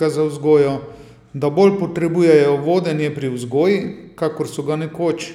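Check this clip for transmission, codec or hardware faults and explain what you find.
Nothing stood out on listening to the speech in this recording.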